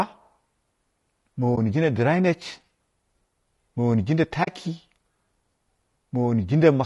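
Low-delay AAC compression runs through the whole of this speech recording: the voice sounds rough and grainy, with noise filling the gaps between pitch harmonics and a thin, somewhat synthetic top end. That points to AAC-ELD, likely at around 32 kbps, where the short frames used to keep delay low cannot separate harmonics cleanly and leave too few bits for the detail. AAC frame loss with muting appears at 1.55 to 1.58 s and again at 4.43 to 4.49 s. The first gap lasts about 20 ms, which fits one missing frame. The second lasts about 40 ms, which fits two. The decoder zeroed the spectrum for the missing audio, and the overlapping windows fade the sound out and back in around each gap, leaving a brief dip at the first and a soft-edged hole at the second.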